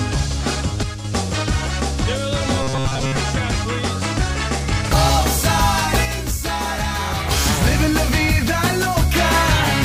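From 0.83 to 1.04 s, one channel drops out, most likely a momentary loss of one side of the stereo feed before the mono sum. Material common to both sides falls abruptly by about 6 dB, and anything carried only on the lost side vanishes. The waveform shows a sudden step down in amplitude with square edges at both ends. On a spectrogram the whole band dims at once and then recovers.

Between 2.63 and 3.18 s comes robotic sound from repeated short buffers. Audio is likely arriving too seldom, so the last short block is replayed while fresh material is skipped. Repetition covers most of this span. The repeats impose a rigid buzz at 133 Hz, which fits blocks of about 7.5 ms, and the result is a flat, metallic drone that only loosely tracks the underlying sound. A spectrogram shows evenly spaced horizontal harmonics of 133 Hz, and the waveform shows identical short cycles tiled end to end.

From 6.05 to 7.31 s, one channel drops out again, and again the likely cause is a lost stereo side. 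This dropout is longer, more than a second. The level falls by about 6 dB with an abrupt onset and release, and a flat-topped dip is visible in the waveform envelope.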